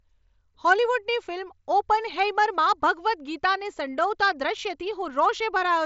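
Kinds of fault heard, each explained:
No faults can be heard.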